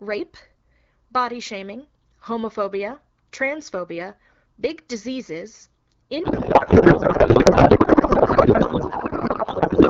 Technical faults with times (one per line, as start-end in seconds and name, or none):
6.23-9.90 codec payload misread